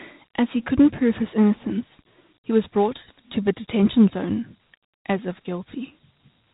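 A speech recording that sounds narrow and telephone-like throughout, with nothing above 3.8 kHz and a plainly audible gritty hiss trailing the voice. This is Dialogic VOX ADPCM: coarse 4-bit step-size coding, at a rate that fits 8,000 samples a second, leaves granular noise riding on the speech.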